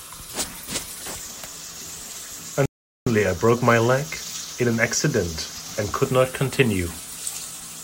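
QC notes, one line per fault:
2.66–3.07 s, playback stall: the speech cuts out abruptly mid-flow and the output sits in dead silence for about 0.41 s before carrying on. The gap has no fade at either edge, which is how a player sounds when it stops delivering samples. The likely cause is the player running out of buffered data, or its audio thread being blocked, until it recovered and resumed output.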